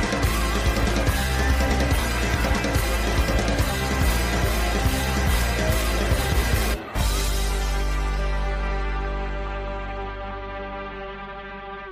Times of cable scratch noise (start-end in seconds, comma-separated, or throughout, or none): none